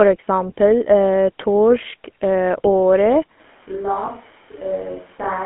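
From start to finish the speech carries GSM full-rate codec damage. The band runs from 200 Hz to 3.4 kHz, which fits a 13 kbps phone link. The codec rebuilds the voice from a coarse pulse excitation, so the speech sounds plainly buzzy and gravelly.

At 3.40 s the sound turns suddenly roomy and hollow, and it stays that way to the end. It drops about 10 dB and loses bass. Room noise rises to roughly 25 dB below the speech. This is likely a switch to a distant microphone.

From 4.06 to 4.10 s, lost GSM frames break the line. One 20 ms frame was missing. The decoder replayed the previous frame's settings to fill the gap. The result is a short, rough, metallic ring in place of the speech.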